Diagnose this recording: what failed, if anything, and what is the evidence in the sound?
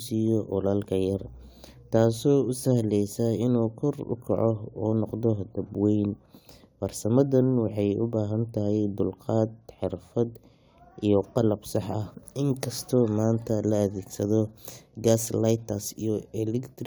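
No fault detected anywhere.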